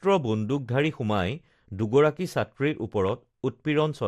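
MP2 compression runs through the whole speech clip. It is likely a low-rate MPEG Layer II stream, around 80 kbps, which fits upper sub-bands being starved of bits and switched off. The result is plainly dull, with granular, gurgling distortion on what remains.

DAB burbling appears from 3.08 to 3.25 s, where bit errors slipped past error correction into the audio data. Corrupted samples put short blips of noise in single sub-bands and corrupted scale factors make sub-bands jump in level for up to a frame, giving a brief burbling over the speech.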